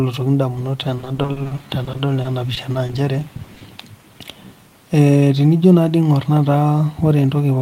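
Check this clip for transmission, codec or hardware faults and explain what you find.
Repeated packet loss (robotic sound) affects the speech twice: from 0.97 to 2.95 s, then briefly from 3.37 to 3.63 s. Audio repeatedly went missing, gaps no longer than about 40 ms, and each was patched by stretching the preceding sound, leaving choppy speech with pieces missing. Unlike a single dropout, the holes recur densely, roughly a fifth to a third of each stretch concealed.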